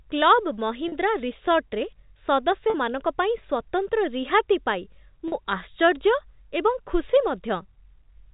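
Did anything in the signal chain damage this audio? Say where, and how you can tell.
Yes: packet loss with pitch repetition at 0.88, 2.70 and 5.28 s. At the network stage, each 40 ms gap, which fits two lost 20 ms packets, is bridged by a briefly held, buzzy repeated pitch period.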